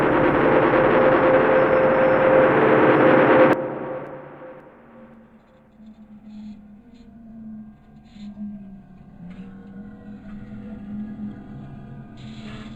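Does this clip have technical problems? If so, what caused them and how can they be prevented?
No, nothing in this sound stood out as a technical problem on listening, so there is nothing here that needs preventing.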